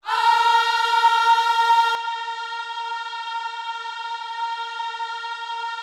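At 1.95 s the sound abruptly narrows and dulls, losing everything above 9.7 kHz, drops roughly 10 dB in level, and gains faint new background noise, with no gap at the change. This is likely an input switched to a poorer device mid-recording.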